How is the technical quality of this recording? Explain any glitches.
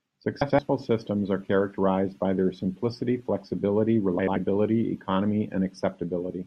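The recording has two brief glitches, both frames out of order. The first runs from 0.41 to 0.59 s, just before "systems are characterized by". The second runs from 4.19 to 4.37 s, right after "by their simplicity flexibility". In each, two adjacent blocks of roughly 85 ms arrived and were decoded in swapped order, which fits runs of about four frames apiece. The result is a short garbled flutter. Unlike a dropout or a stutter, nothing is lost or repeated, and the timing afterwards stays intact.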